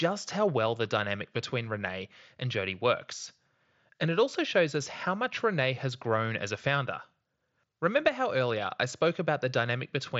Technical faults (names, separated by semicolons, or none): none